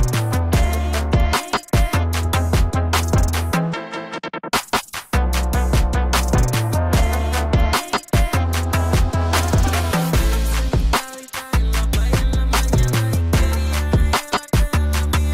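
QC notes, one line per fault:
No technical faults can be heard anywhere in the signal.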